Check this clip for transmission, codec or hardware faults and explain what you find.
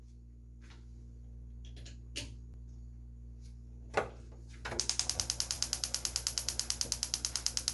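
Two problems here. The whole clip has a grainy, breathy edge with nothing above 11.5 kHz, which points to Bluetooth LC3 compression, likely at around 48 kbps with 10 ms frames. The codec drops much of the top band and fills gaps with noise, hence the hiss-like texture.

At 2.54 s there's a quick click from overlapping chunks. A new chunk started about 12 ms before the previous one finished, so that sliver plays twice and the join stutters, which fits audio handled in 3-second pieces.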